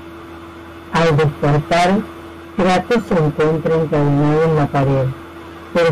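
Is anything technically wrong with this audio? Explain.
Yes. Hard clipping throughout: driven about 19 dB too hot, nearly a third of the speech gets its peaks sliced flat, giving a harsh fuzz on every loud sound.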